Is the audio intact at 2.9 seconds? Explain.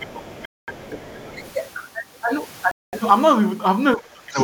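No. A Bluetooth stall runs from 2.71 to 2.93 s: the speech drops to silence for about 0.22 s, likely because interference delayed packets and the headphones' buffer emptied.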